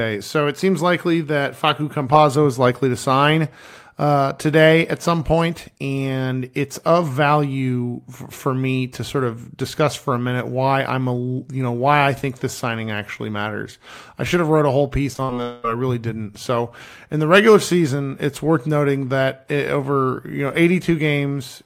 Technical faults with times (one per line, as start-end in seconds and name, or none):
15.13-15.35 repeated packet loss (robotic sound)
15.42-15.66 long network dropout